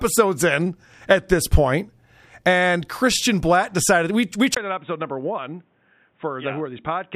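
Input switched to a poorer device at 4.55 s, just after "decided we we": a 20 ms gap, then the speech turns dull, drops about 10 dB, loses everything above 3.8 kHz and gains a noise floor roughly 40 dB down, likely from a narrower-band microphone or headset.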